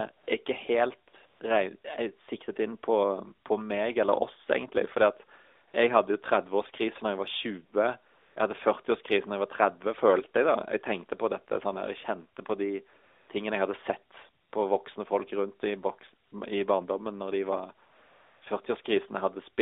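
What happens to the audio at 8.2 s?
From 8.14 to 8.36 s the real background drops out and a smooth, even hiss takes its place, switching in and back out abruptly. This is AMR comfort noise: for about 220 ms the phone judged the talker silent and stopped sending speech frames, so the receiving end filled the gap with synthetic noise built from a rough estimate of the background's level and spectral shape, confined like the rest of the call to roughly 300 to 3700 Hz.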